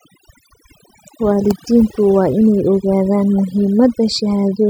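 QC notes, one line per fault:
Throughout: overdone noise removal. The noise reduction stage was run far too aggressively, treating any frequency band that sat close to its noise estimate as noise and pulling it down hard or switching it off entirely. The quiet detail in the speech fell under that threshold along with the noise, so the gaps between phrases collapse to near silence dotted with twinkling, chirpy specks.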